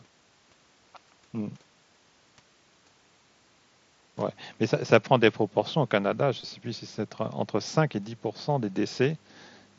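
From 6.41 to 6.52 s the speech carries concealed Bluetooth headset packet loss. Scattered over about 105 ms, roughly 52 ms of audio never arrived from the headset, and the phone filled each gap with a copy of the best-matching recent stretch. The longest run is about 22 ms, so the patches pass as a brief buzzy roughness. On a waveform the filled spans repeat the same cycle shape. A spectrogram shows smeared, copied harmonics inside the wideband mSBC band, which reaches 8 kHz.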